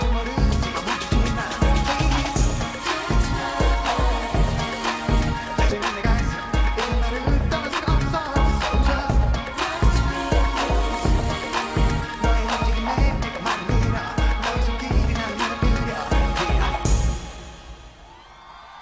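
At 5.70 s a skip ahead occurs: about a second of audio was discarded while later audio was already queued, so playback jumps straight forward with no gap. The waveform shows an abrupt splice, and the spectrogram an instant change in content with no silence.

From 5.92 s to 17.52 s a jitter buffer speed-up runs at 103%. The receiver repeatedly trimmed short pitch-period slivers to shed excess delay, removing under half a second in total, so the audio runs slightly faster at unchanged pitch. On a spectrogram, events arrive marginally early but harmonics stay put. Throughout, the call codec leaves nothing above 8 kHz, a flat ceiling in the spectrogram.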